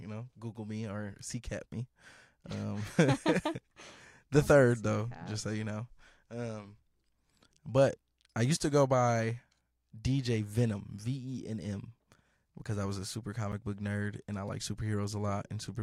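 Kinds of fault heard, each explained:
Block of digital silence: a single sharp tick at 13.52 s, where the speech drops to silence for about 8 ms and snaps straight back with no fade. The output buffer likely went unfilled in time, so those samples became zeros.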